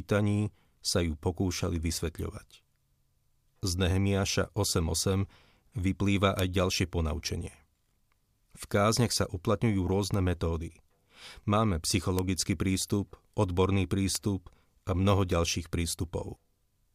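Speech with seven bit error spikes, single-sample ticks at 0.93, 6.39, 7.28, 9.13 (just before "sa uplatňujú"), 10.14, 12.19 and 14.15 s, peaking at about -6 to -24 dBFS. Each is a flipped bit that jumps and returns, so unlike a dropout or edit click, no audio is lost.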